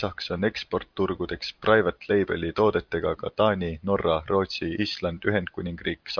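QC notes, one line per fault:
Nothing to flag here; I didn't catch a single problem anywhere in this bit of speech.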